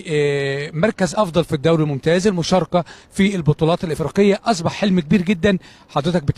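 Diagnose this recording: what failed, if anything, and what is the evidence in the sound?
Codec stage: damaged data in the compressed stream produces brief disturbances at 1.12–1.16 s and 3.90–3.97 s, where the decoder misreads corrupted frames, loses sync, then recovers.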